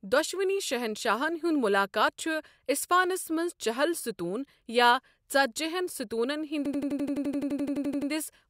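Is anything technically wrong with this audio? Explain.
Yes. From 6.66 s to 8.11 s the speech freezes into a system hang loop: an 85.33 ms fragment repeats exactly, 17 times, at 11.7 Hz. The playback side stalled while the sound hardware kept cycling one ring buffer, and the loop length fits a 4096-sample buffer. It comes across as a rapid mechanical stutter. On a waveform the identical block tiles end to end; on a spectrogram the same slice recurs as vertical stripes every 85 ms.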